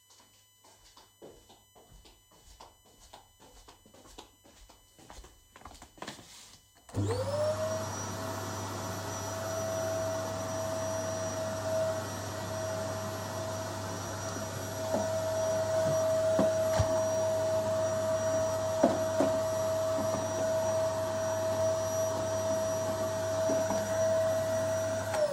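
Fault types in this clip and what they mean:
USB whine: a steady, fixed-pitch whine from the USB bus's 1 ms frame timing leaking in through power or ground. It sits on a 1 kHz fundamental, loudest at the 3 kHz harmonic, about 35 dB below the sound, running the whole way through.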